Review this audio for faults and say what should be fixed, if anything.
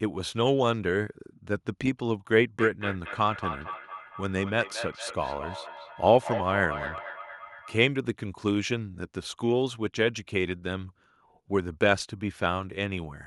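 Feedback echo between two devices runs from 2.59 to 7.81 s. The speech returns roughly every 200 ms, thin and ringing, peaking about 10 dB below the original, because a second device in the room replays this microphone. Keep one device per room.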